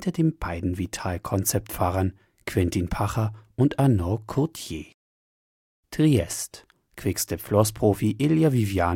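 Speech recording, no technical faults audible anywhere in the clip.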